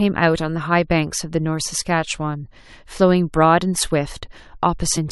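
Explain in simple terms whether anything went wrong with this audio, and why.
A brief glitch cuts into the speech near the very end, from 4.96 to 4.98 s. That blip comes from damaged data in a compressed stream: part of the file was corrupted, so the decoder misread that spot and had to find its footing again.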